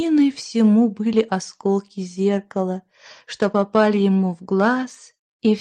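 No technical faults can be heard in this clip.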